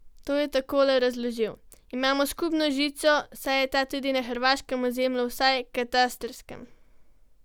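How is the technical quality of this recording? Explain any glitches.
No technical glitches can be heard in this speech recording, and the signal holds steady throughout with nothing disturbing it.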